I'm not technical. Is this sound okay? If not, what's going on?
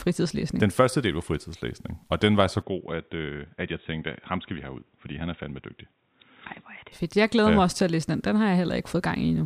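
No. Right after "og den var så", at 2.62 seconds, the voice suddenly turns dull and boxy, as if heard through a cheap phone, with nothing above 3.8 kHz. It also gets a bit quieter and picks up a faint new background hiss. There's no gap at the change. At 6.92 seconds it clears up again. This is most likely an input switched to a poorer device: the recording jumped to a lower-quality microphone partway through, then back.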